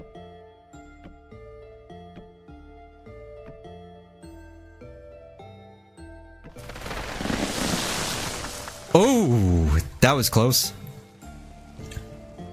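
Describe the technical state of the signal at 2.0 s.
At 2.0 s you're hearing crude rate conversion, present across the whole clip. The sample rate was stepped up by linear interpolation with no filter, which fits a 32 kHz to 48 kHz change. The error sits roughly 20 dB under the signal, a gritty inharmonic fizz that rides on loud and high sounds.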